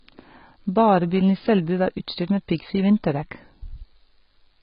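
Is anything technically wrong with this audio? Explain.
Yes. Throughout the speech, nothing is present above 5.1 kHz, and sibilants and vowels carry a warbling, fizzy smear. This is likely heavy AAC compression, consistent with AAC-LC near 16 kbps, which drops high bands and starves the rest of bits. A plain low-pass filter would sound dull but clean, without this texture.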